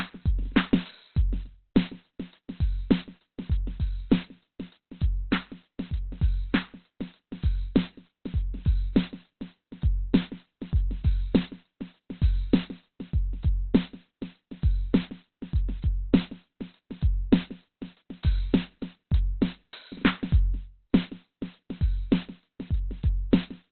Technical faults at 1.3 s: Opus compression

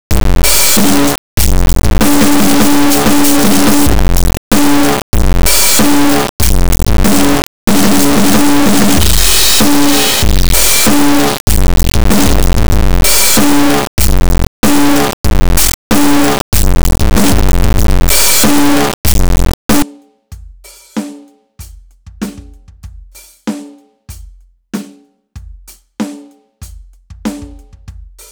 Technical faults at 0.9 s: integer read as float

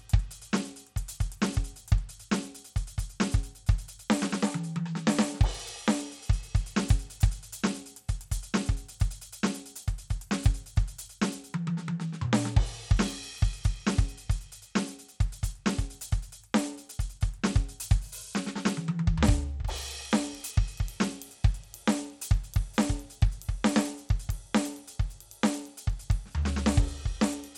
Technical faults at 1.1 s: Bluetooth SBC compression

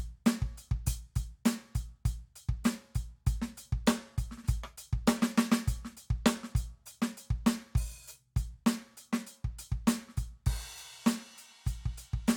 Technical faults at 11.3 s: none

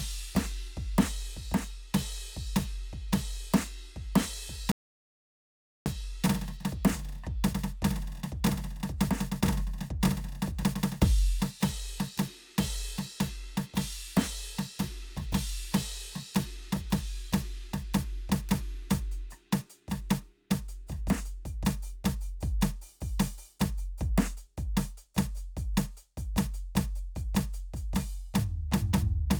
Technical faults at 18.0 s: none

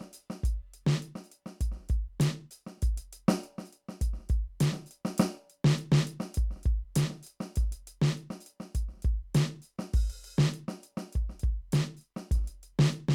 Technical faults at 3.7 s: none

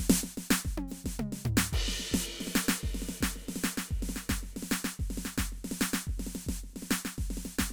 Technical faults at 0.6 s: none

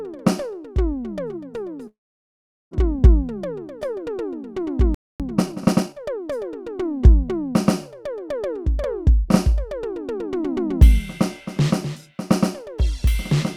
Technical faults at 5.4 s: time-compressed catch-up

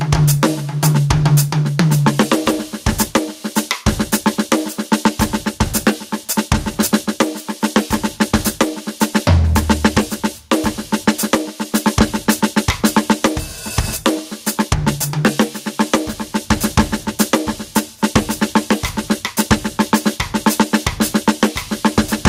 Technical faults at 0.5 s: gain pumping

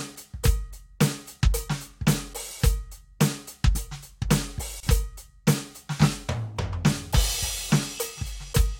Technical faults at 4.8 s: gap at a join of encoded pieces

